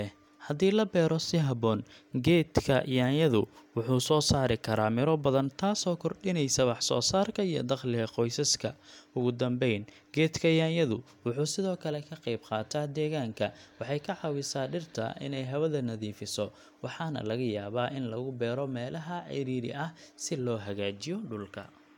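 No technical faults can be heard anywhere in the recording.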